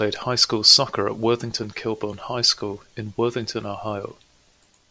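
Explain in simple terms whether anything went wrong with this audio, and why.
Nothing went wrong here: the recording of speech comes through steady and intact, with no technical faults to be heard at any point.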